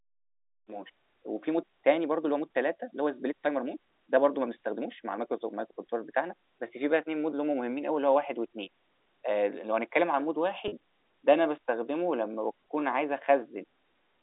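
At 10.68 s there's packet loss with pitch repetition: about 40 ms went missing, which fits two 20 ms packets, and the receiver filled it by looping the last pitch cycle, so you hear a brief held, buzzy smear before the telephone-band speech resumes at 10.72 s.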